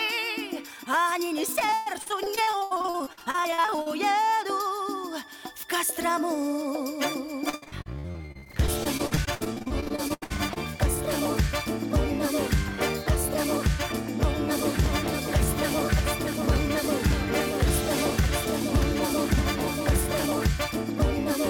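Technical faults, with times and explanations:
1.59–3.88 s, repeated packet loss (robotic sound): 32 gaps up to 119 ms were patched by extending prior sound, about 38% concealed, so it sounds choppy. The spectrogram shows smeared, blocky repeated frames.
2.96–4.10 s, jitter buffer slow-down: the receiver repeated pitch periods, adding 43 ms and playing at 97% speed at the same pitch. The waveform shows near-identical cycles repeating.
7.49–10.58 s, repeated packet loss (robotic sound): 35 concealed gaps, longest 78 ms, about 32% of the span, give choppy, broken sound. The spectrogram shows stuttering, frozen harmonic stripes.
14.52–20.26 s, doubled audio track: a full-band copy roughly 0.7 s late and about 5 dB quieter, likely from a second capture path. The spectrogram shows a fainter duplicate pattern shifted right, starting and stopping abruptly.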